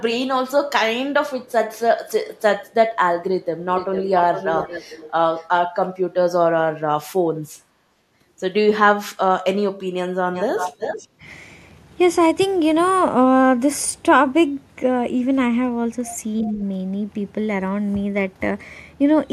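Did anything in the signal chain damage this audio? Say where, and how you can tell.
Yes. An echo leak in call processing returns a delayed copy of the speech at 1.46–1.52, 2.35–2.41, 2.66–2.74, 3.76–5.11, 5.37–5.46, 10.34–11.08 and 16.45–16.50 s, lagging 355–449 ms. It is faint except for the long, loud stretches at 3.76 and 10.34 s. It is likely far-end loudspeaker pickup that the echo canceller failed to remove.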